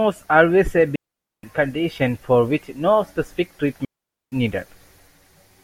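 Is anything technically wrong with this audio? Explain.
Yes. A digital wireless dropout hits this speech twice, at 0.96 to 1.43 s and 3.85 to 4.32 s, each muting for about 0.47 to 0.48 s. The receiver loses too much data and mutes with a very quick fade, leaving clean silent holes without noise bursts. On a waveform these appear as flat gaps, and on a spectrogram as blank vertical bands.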